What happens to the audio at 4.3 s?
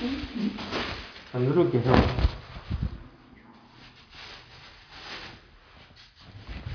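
Nothing goes wrong at 4.3 s: the sound carries on intact through that moment, with no dropout, click or distortion.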